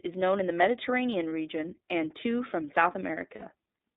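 iLBC codec, throughout: the speech passes through a narrowband channel from about 250 Hz to 3.7 kHz. Each frame is coded on its own, which gives a plainly audible rough, slightly synthetic edge. The sound fits iLBC's 13.33 kbps mode with 30 ms frames.

Lost iLBC frames, 3.35 to 3.43 s: about 60 ms of audio is missing, which fits two dropped 30 ms frames. The decoder fills the gap by repeating the last pitch cycle mixed with noise, so it sounds like a brief held, buzzy vowel that recovers almost immediately.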